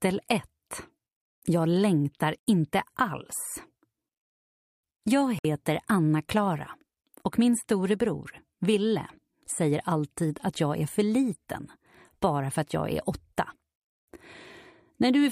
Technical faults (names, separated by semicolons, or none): Bluetooth dropout